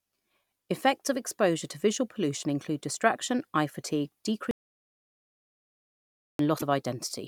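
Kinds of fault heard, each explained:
Audio dropout to silence: after "include distraction eye fatigue" the speech drops to dead silence with no room tone for 1.88 s, likely from a lost input feed.
Damaged data in a compressed stream: at 6.55 s there's an 80 ms blip where the decoder misreads corrupted frames, then resyncs on the next header.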